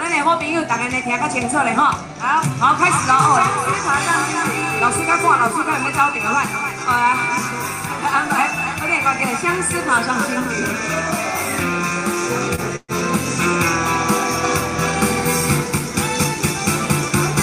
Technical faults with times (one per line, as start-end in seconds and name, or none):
12.55-12.61 short stall from a late packet
12.76-12.91 call audio freeze